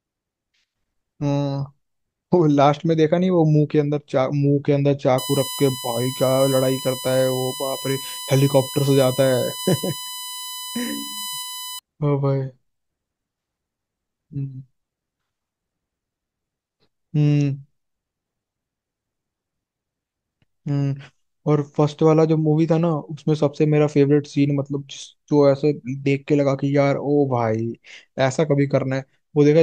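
From 5.18 s to 11.79 s the speech carries a USB whine: a steady tone built on 1 kHz, strongest at its 3 kHz harmonic, sitting roughly 10 dB under the speech. The USB bus's 1 ms frame current is leaking into the audio through shared power or ground.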